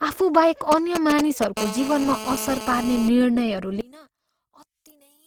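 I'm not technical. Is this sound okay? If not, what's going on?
No. Several things are wrong.

Opus compression, throughout: the speech sounds grainy and rough, likely from squeezing the audio hard with the Opus codec to save space.

GSM signalling bursts, 0.72 to 1.58 s: a galloping ticking buzz from a nearby mobile phone whose radio pulses are picked up by the recording equipment.

GSM phone buzz, 1.58 to 3.09 s: the phone settles into a steady, harsh buzz, pulsing 217 times a second, laid over the speech.

One channel inverted, 3.81 s to the end: the speech almost disappears, likely because one stereo side is flipped upside down and cancels the other when combined.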